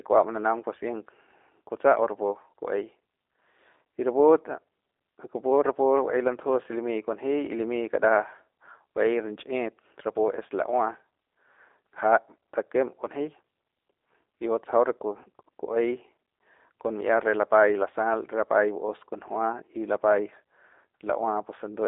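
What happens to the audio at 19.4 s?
At 19.4 s the speech sounds plainly rough and synthetic, thin and boxed-in, with nothing above 3.6 kHz and a weak low end below 300 Hz. This is G.729 codec damage, present throughout: each 10 ms frame is rebuilt from a vocal tract filter, pitch predictor and a few pulses, which fits 8 kbit/s.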